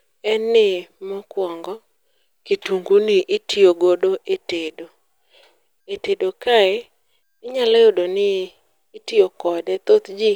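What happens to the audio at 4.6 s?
Nothing goes wrong at 4.6 s: the speech carries on intact there, with no dropout, click, distortion or other fault.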